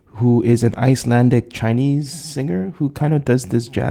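No technical faults can be heard in this speech.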